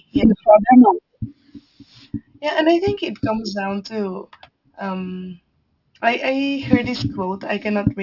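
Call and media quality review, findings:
Aliasing, throughout. Sibilants gritty and metallic, energy packed hard against a 6 kHz ceiling. Points to downsampling to 12 kHz with no anti-alias filter; content above 6 kHz folds back as unrelated tones, roughly 25 dB below the speech.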